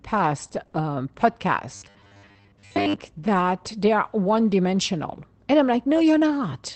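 From 0.43 to 0.75 s there's repeated packet loss with a robotic edge. Short holes, none longer than 20 ms, keep opening, and each gets papered over by stretching the last bit of sound, so about a quarter of that stretch is patch rather than real audio. That's what makes it choppy.

Then from 1.75 to 2.96 s, right up to "that they are one", you get that robotic sound from repeated short buffers. There's a steady 100 Hz buzz, likely because fresh audio arrived too rarely and a 10 ms slice kept looping in its place for most of that stretch.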